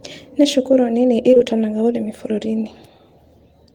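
Short concealed packet loss hits this speech clip three times in a row, at 1.31, 1.35 and 1.38 s, just after "cukuru nini", forming one smeared stretch to about 1.42 s. Around 20 ms of audio failed to arrive in time for each, and the receiver covered each gap by extending the preceding sound, pitched or noise-like, then crossfading back. The result is a brief wobbly blur where detail goes missing.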